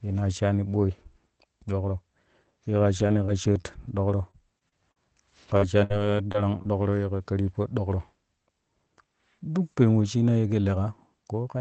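Repeated packet loss strikes twice in this speech. From 2.99 to 4.98 s, seven separate holes open, the longest about 40 ms. From 5.54 to 6.66 s, four more appear, the longest about 59 ms. Each missing chunk is patched by stretching the last received sound, roughly a fifth of a second of rebuilt audio in the first stretch and less in the second. The result is choppy speech with small pieces dropped, heard over an 8 kHz-wide call codec sound.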